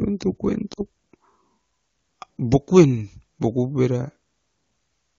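Speech, with a short run of lost AMR speech frames between 0.73 and 0.82 s. The decoder fills the gap by repeating its last good settings at falling gain, so the sound smears and sags for about 40 ms (two 20 ms frames) over an AMR-WB link.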